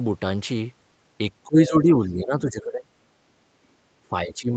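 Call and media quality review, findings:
Speech suppressed in double talk, 1.45–2.91 s: talker level dips in patches, about 20 dB at deepest, roughly 1.5 s affected in total. Likely echo canceller in double talk, unable to separate near talker from loudspeaker echo and attenuating both.

Speech suppressed in double talk, 4.08–4.52 s: shorter dip, about 15 dB at worst, roughly 0.3 s affected. Same likely mechanism: overlapping far-end audio treated as echo, near-end speech turned down with it.

Other side's voice leaking through, 1.6–1.69 s: brief scrap of a second voice, under 0.1 s, about 10 dB below the talker, during the first suppression dip. Likely residual loudspeaker echo the canceller did not fully remove from the microphone signal.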